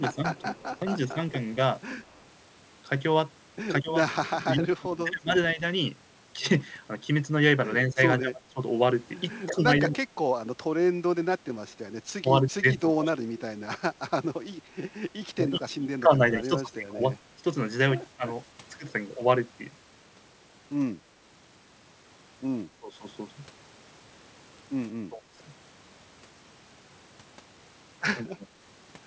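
From 0.0 to 18.6 s the speech repeatedly dips and breaks into pieces, about five seconds in total, with the deepest drops around 20 dB. This is speech suppressed in double talk, likely caused by an echo canceller that could not tell this talker from the far side and turned everything down. On a waveform the envelope shows sudden notches. On a spectrogram, vertical gaps cut across the harmonics, with the upper bands fading first.

Between 0.35 and 2.21 s a faint echo leak trails the voice by about 178 ms, roughly 35 dB below the speech. It is likely loudspeaker sound that the far end's canceller failed to remove and sent back. It is heard as a ghostly doubling. A spectrogram shows a weak copy of the harmonic pattern shifted right by that delay.

From 22.79 to 28.52 s the double-talk suppression returns more briefly, under a second in all, with drops around 25 dB. It appears as short, deep notches in the waveform and blank slices in the spectrogram, which, like the whole clip from the G.722 call path, shows nothing above 8 kHz.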